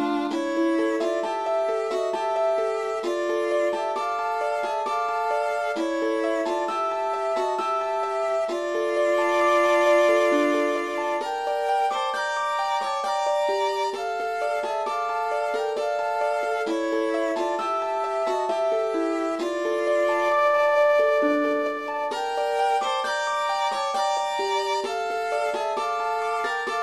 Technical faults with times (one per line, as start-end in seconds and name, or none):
none